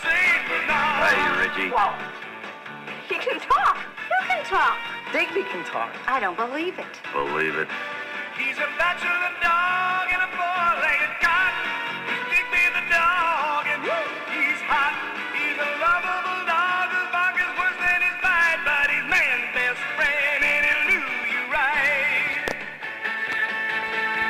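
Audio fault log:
Nothing to log here; the audio runs along with no technical faults to note anywhere in it.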